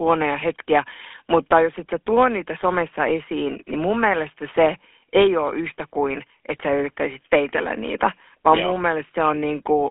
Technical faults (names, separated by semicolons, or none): GSM full-rate codec